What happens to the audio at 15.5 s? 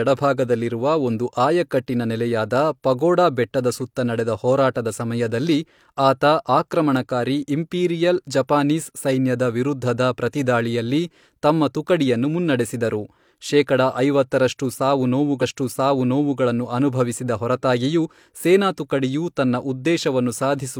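A stream segment repeated from 15.38 to 16.36 s. After "ಮುನ್ನಡೆಸಿದರು ಶೇಕಡ ಐವತ್ತರಷ್ಟು ಸಾವು", the player jumps back and replays about 0.98 s, with a small blip at the jump.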